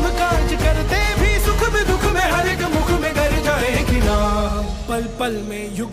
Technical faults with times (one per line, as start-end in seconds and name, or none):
none